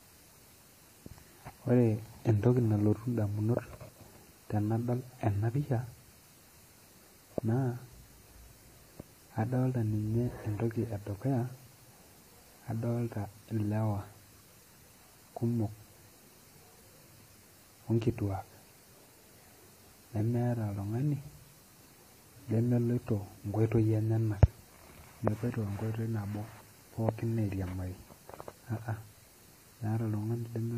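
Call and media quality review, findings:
Transcoding between lossy codecs, throughout. Swirly, smeared highs with a second layer of artefacts on top; nothing above 15.2 kHz. Likely a WMA-style encode at around 64 kbit/s re-encoded as AAC-LC near 48 kbit/s, the later codec wasting bits on inherited artefacts.

Mains buzz, 11.05 s to end (30.78 s). Steady raspy buzz on 50 Hz, faint, roughly 40 dB under the speech. Switching spikes twice per mains cycle entering the chain via a dimmer, rectifier or unshielded lead, harmonics stacking into the kilohertz range.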